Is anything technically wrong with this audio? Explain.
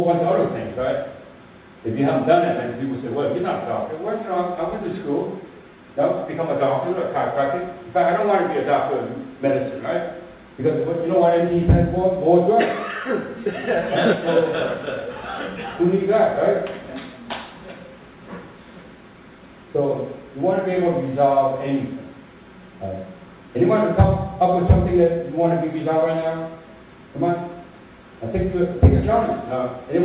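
No, nothing is technically wrong with this audio.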